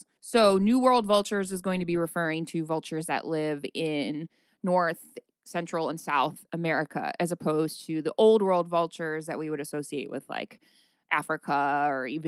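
Nothing in the recording stood out as a technical problem on listening.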